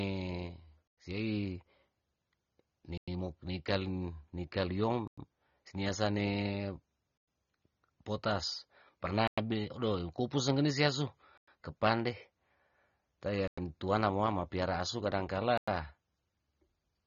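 A speech recording that was likely encoded with low-bitrate AAC compression, consistent with AAC-LC near 24 kbps, so nothing is heard above about 6.9 kHz, and the voice sounds plainly dull and smeared, with a warbling, fizzy edge on sibilants. The audio was also delivered in 2-second chunks with a gap between chunks, so silence is inserted at every join: hard-edged 100 ms holes at 0.88, 2.98, 5.08, 7.18, 9.28, 11.38, 13.48 and 15.58 s, repeating every 2.1 s.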